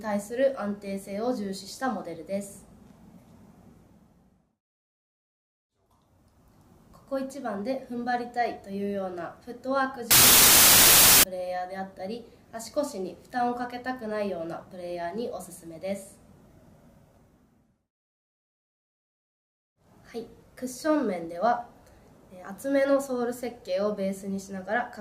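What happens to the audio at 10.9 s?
A wrong sample width fault runs from about 10.11 s to 11.23 s. Audio written as 32-bit integers is read as 16-bit, so every sample splits into two values. The high half keeps the top bits of the signal while the low half turns into loud, broadband noise. The doubled sample count plays back at half speed, an octave lower, with the original sound buried beneath the noise.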